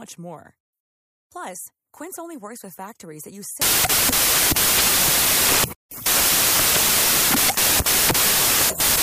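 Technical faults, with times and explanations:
3.62–9.02 s, samples built from the wrong bytes: after "with factories that use", bytes are misassembled. Low bits dominate each value, giving loud, harsh broadband noise to the end.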